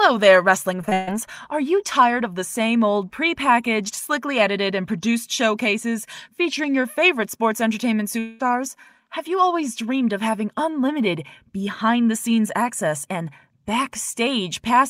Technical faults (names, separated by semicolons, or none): short concealed packet loss; burst of packet loss; long network dropout